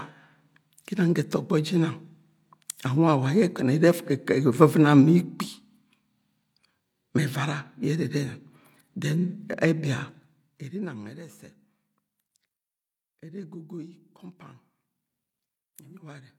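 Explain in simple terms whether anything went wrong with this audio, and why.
Between 10.08 and 11.24 seconds, the volume of this speech was turned down sharply, but in small jumps, about 30 per second, instead of one smooth slide. That fault is called zipper noise. Each jump puts a tiny click into the sound, and so many clicks in a row make a fast ticking or zipping that rides on the speech while it gets much quieter.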